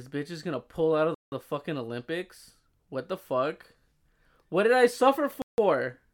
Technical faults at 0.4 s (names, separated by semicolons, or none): none